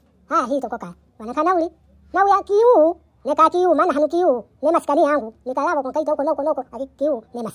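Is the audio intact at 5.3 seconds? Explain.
No. At 5.3 seconds the speech has a wrong sample rate, as it does throughout the clip. It is played faster than it was recorded, with no conversion. Speed rises 1.45 times and pitch about 6.45 semitones, which fits 22 kHz audio played at 32 kHz. The speech sounds high and hurried.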